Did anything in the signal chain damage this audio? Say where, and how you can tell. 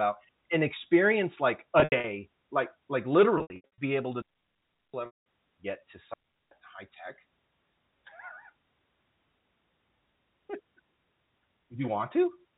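Yes. Packet loss with pitch repetition appears at the network stage at 1.8–2.04 s, 3.38–3.78 s (after "like like", before "be able to") and 5.06–5.21 s (before "get to"). Lost runs of up to 80 ms become a held, buzzy repeated pitch period that fades out. That buzz, rather than silence, is what distinguishes it from a dropout.

A digital wireless dropout on the radio link leaves clean near-silent holes at 4.22–4.94 s (about 0.72 s) and 6.14–6.51 s (between "get to" and "high tech"). The receiver mutes with a very short fade, with no noise burst on either side and no buzzy fill-in.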